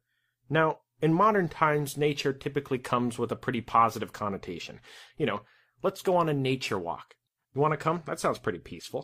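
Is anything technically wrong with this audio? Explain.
No, nothing technically wrong can be heard in this speech recording. No part of it points to a problem in how it was captured, transmitted or played back.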